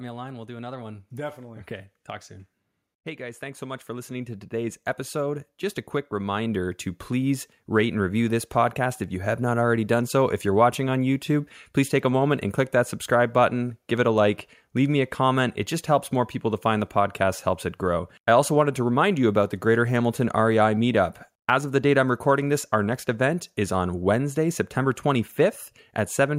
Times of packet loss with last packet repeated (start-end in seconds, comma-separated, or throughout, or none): none